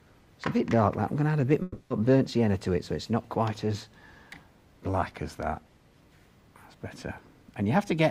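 From 1.62 to 1.91 s the sound smears into a fading buzz for about 280 ms, then resumes with that stretch missing, likely a long network dropout.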